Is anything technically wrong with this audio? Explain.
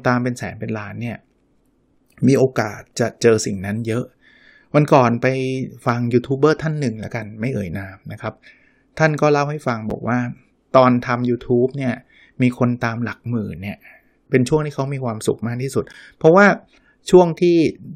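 Yes. There is a gap between stream segments at 9.90 s and again at 15.93 s, 6 s apart, which fits 6-second segments. At each boundary the time stamps of consecutive segments fail to meet, so the player pads the hole with silence, about 8 ms the first time and 13 ms the second. Nothing is lost from the speech. It is briefly interrupted by a hard-edged dropout, heard as a tiny click-like break in continuity.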